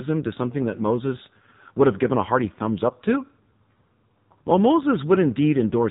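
From start to finish the speech sounds buzzy, synthetic and boxed-in, with nothing above 3.8 kHz. This is the AMR narrowband mobile codec, heavily damaged: its vocal-tract model, starved of bits, rebuilds the voice crudely, which fits a low mode around 5.9 kbps.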